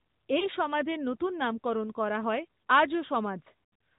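Throughout, the sound is band-limited to 4 kHz with a buzzy, synthetic edge, the plainly audible signature of the AMR narrowband mobile codec at a mid rate near 10 kbps. This differs from simple low-pass filtering. At 0.40 to 0.48 s, just before "সমাজের নতুন নামকরণ করা", a lost AMR speech frame causes a brief warble. The decoder repeats its last pitch and vocal-tract settings instead of leaving a gap. From 3.64 to 3.80 s, scattered losses with an 80 ms longest run stretch the sound and fade it, then it returns rough.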